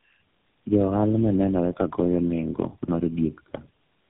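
Throughout the speech sounds rough, muffled and warbly, with nothing above about 3.7 kHz. This is tandem speech coding: the sound points to three low-rate speech codecs in a row, each re-encoding the previous one's already degraded output, so the damage compounds.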